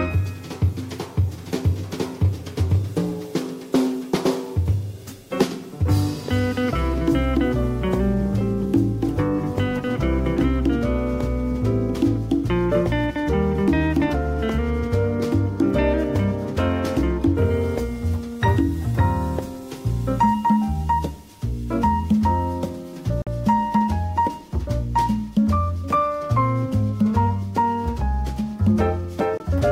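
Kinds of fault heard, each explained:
Bluetooth dropout: The audio cuts to silence twice, for about 46 ms at 23.22 s and about 23 ms at 29.37 s, and each time it picks up further along, as though it had carried on playing during the gap. The likely cause is audio packets failing to reach the headphones in time and being discarded; the gap lengths fit two lost packets, then one.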